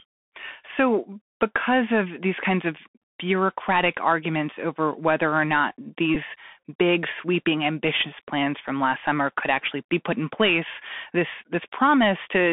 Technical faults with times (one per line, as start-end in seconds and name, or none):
0.00-12.52 Bluetooth CVSD headset codec
6.15 Bluetooth headset packet repeated